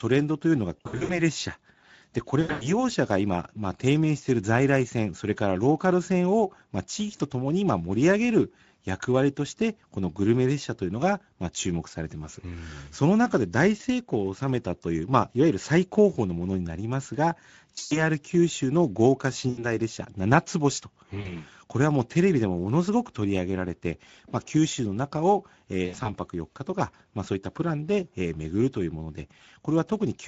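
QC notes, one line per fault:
Throughout: Speex codec. Hoarse, plainly noisy speech from a CELP coder short on excitation bits, which fits a rate around 16.8 kbps.
0.78–1.23, 2.41–2.83, 17.75–18.00, 19.49–19.66, 21.21–21.31 and 25.85–26.11 s: VoIP packet loss concealed by the speech codec. Losses of 40 to 200 ms, in runs of up to 120 ms, get filled with a stretched buzzy tone or coloured noise that fades, and the voice stays weak briefly after each gap.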